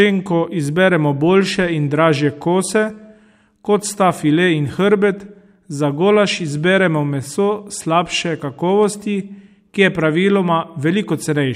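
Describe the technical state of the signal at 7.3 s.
Clock slip clicks are present at 7.3 s, part of a run from 0.3 to 11.4 s. Faint ticks recur about five times a second, each a single dropped or repeated sample. The likely cause is two unsynchronised clocks drifting apart by around 100 ppm.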